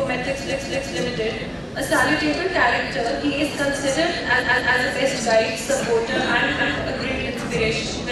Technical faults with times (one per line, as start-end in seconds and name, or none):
0.49-0.95 repeated frames
4.39-4.76 repeated frames
6.57-6.76 repeated frames